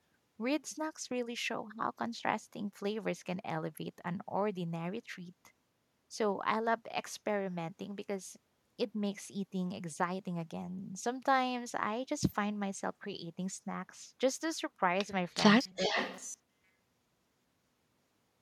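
At 15.36 to 15.40 s the speech briefly dips by about 5 dB for roughly 40 ms. It is a small, quick sag in level. This is speech suppressed in double talk: with both ends talking at once, the echo canceller likely could not tell this talker apart from its loudspeaker echo and pulled the whole signal down to be safe.

From 15.54 s to the end of the clip, the voice turns into a rigid, metallic buzz at 188 Hz that only loosely tracks the speech underneath. This is robotic sound from repeated short buffers. A period of 188 Hz is about 5.3 ms, which fits a buffer of roughly 5 ms being replayed over and over. Essentially all of this stretch is repetition rather than fresh audio, likely because new packets stopped arriving on time.

Within that buzz, at 15.76 to 15.96 s, the level drops again by about 10 dB for around 150 ms. This is a deeper case of the same double-talk suppression, again likely triggered by the far side speaking over this one.

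Starting at the same moment, from 15.76 to 16.27 s, a delayed copy of the voice trails the original by 391 ms at about 10 dB below it. It sounds like a faint, lagging shadow. This is echo leak: the far end's loudspeaker output likely reached its microphone, and its canceller failed to remove all of it, so the residue was sent back.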